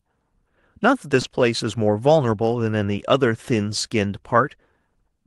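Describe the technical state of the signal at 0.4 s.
At 0.4 s the speech is intact, with no fault present, only the normal band-limited sound of the Opus call path, which extends up to about 12 kHz.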